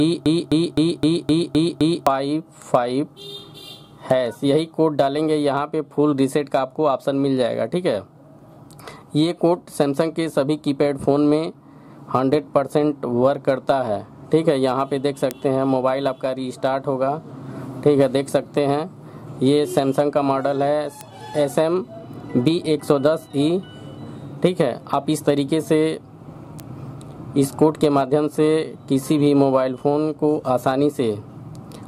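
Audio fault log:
0.00–2.07 s, broken-record loop: The audio is already stuck when the clip begins, with the same 258 ms fragment repeating exactly, back to back, seven times. This is likely a stalled player, encoder or stream resending its last held fragment, so the audio that belonged here is lost.
15.31 s, 21.01 s, 26.60 s, bit error spike: Each is one sharp, broadband tick with no connection to the surrounding sound. In each case a single sample jumps by a power of two and snaps back, the signature of one flipped bit in memory or on a digital link.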